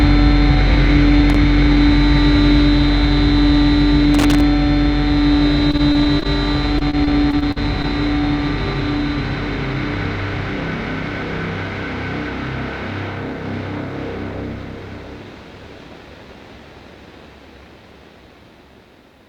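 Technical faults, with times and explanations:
1.30 to 1.36 s and 4.14 to 4.41 s, loose connector crackle. A worn or dirty contact opened and closed rapidly. That chopped the signal into bursts of scratchy crackle. The first burst is very brief. The second lasts about a quarter second.
5.71 to 6.26 s and 6.78 to 7.85 s, repeated packet loss (robotic sound). Data kept arriving late or not at all. Each hole was patched by stretching the previous sound, so the audio turns choppy with pieces missing. Holes reach 21 ms and 44 ms, with about 15 to 16% of each stretch patched.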